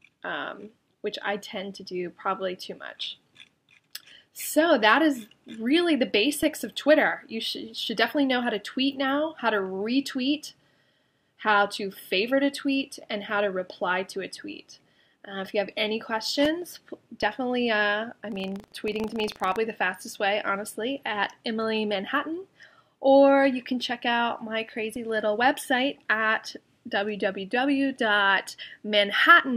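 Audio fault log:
18.28–19.59 s, buffer tearing: a rattling, robotic buzz at 25 Hz rides on the sound for this stretch. The 25 Hz rate points to a buffer period of about 40 ms. The writer and the hardware reader of the ring buffer have slipped and cross inside each period, so a small sliver of every buffer replays audio from roughly a tenth of a second earlier. The hard joins on both sides of that sliver produce the steady buzz.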